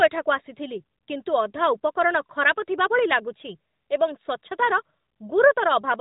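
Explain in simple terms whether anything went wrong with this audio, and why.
Nothing went wrong: the speech came through an AMR narrowband mobile codec working as intended, which is why it has the familiar phone-call sound with nothing above about 3.8 kHz and only a light coded texture.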